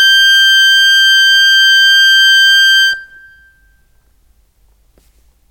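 No faults to report: the music runs with no dropouts, glitches or level problems anywhere in the clip.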